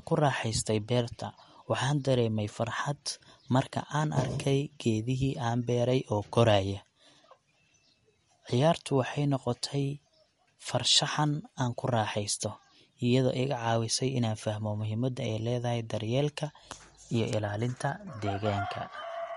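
Speech with a hard treble ceiling at 11.2 kHz across the whole clip and clearly audible watery, swirling artefacts on sibilants, likely from MP3 compression at a low bitrate such as 48 kbps. A spectrogram shows a flat cut-off and weak partials flickering on and off between frames.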